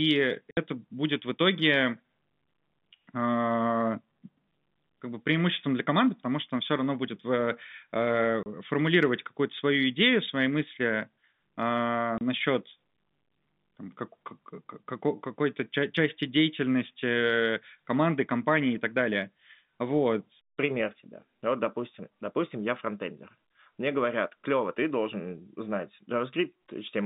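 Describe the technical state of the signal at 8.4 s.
At 8.43 s a packet of the speech stream failed to arrive, and the receiver filled the gap with plain silence instead of concealing it. The result is packet loss filled with silence: a 30 ms hole, consistent with a single lost packet, running to 8.46 s. The signal drops abruptly to nothing and returns just as sharply, leaving a hard-edged gap in the narrow telephone-band G.711 sound.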